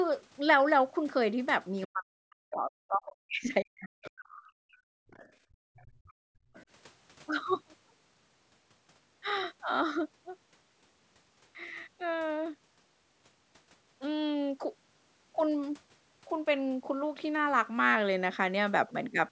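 A speech recording with echo-canceller trouble concentrated between about 1.9 and 6.7 s. From 1.87 to 5.12 s, both ends were likely talking at once, and the canceller, unable to tell the local talker from loudspeaker echo, turned everything down. This is speech suppressed in double talk: for roughly 3 s the voice dips, at worst by around 40 dB. Residual echo from the loudspeaker also got past the canceller, most likely, so the other side's voice leaks through in brief scraps at 4.04–4.11, 5.12–5.27, 5.76–5.85, 6.07–6.11 and 6.54–6.66 s, sitting roughly 20 to 30 dB below the main speech. Between 5.40 and 6.54 s, the canceller clamped the microphone while the loudspeaker played, so the background is gated by the echo canceller, dropping by up to about 37 dB for around a second before returning. The call's microphone processing caps the audio at 8 kHz, as expected for such a path.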